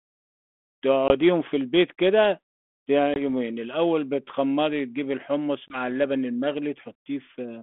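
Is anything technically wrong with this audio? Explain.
Yes. At 1.08 s, 3.14 s and 5.68 s the speech drops into a brief, hard-edged silence, then returns slightly distorted and settles within tens of milliseconds. This is packet loss on an ADPCM call: each gap suggests a single lost 20 ms packet, and afterwards the decoder's adaptive predictor and step size no longer match the sender's until they re-converge. The narrow telephone band, roughly 200 Hz to 3.5 kHz, fits G.726 ADPCM at 32 kbit/s.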